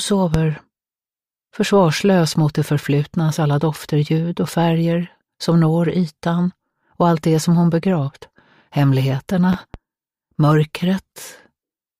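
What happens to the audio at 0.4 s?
A sudden voltage step, likely from a plug, switch, static discharge or driver glitch, lands on the signal between 0.34 and 0.38 s. The result is a single loud pop, peaking roughly 15 dB above the surrounding sound, which continues underneath it.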